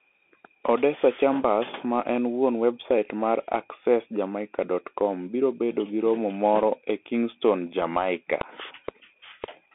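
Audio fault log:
Throughout: Bluetooth CVSD headset codec. The speech is confined to a narrow band of roughly 250 Hz to 3.5 kHz, with nothing above 3.8 kHz. One-bit delta steps that cannot keep pace with fast, loud high content leave scratchy s sounds and a granular hiss, which fits 64 kbps CVSD.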